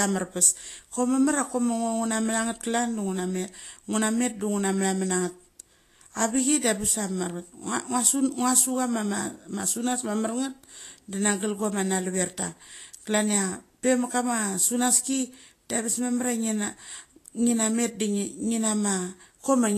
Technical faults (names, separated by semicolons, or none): Vorbis compression